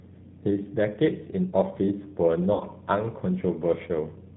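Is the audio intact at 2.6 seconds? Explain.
No. From 2.53 to 2.64 s there is VoIP packet loss concealed by the speech codec: roughly 70 ms went missing, fitting about seven 10 ms frames, and the decoder extended the last pitch and filter into a fading buzzy tone or coloured noise, seen as a shrinking waveform. The G.729 codec also runs throughout at 8 kbit/s, giving a plainly rough, synthetic texture, with the spectrogram showing nothing above 4 kHz.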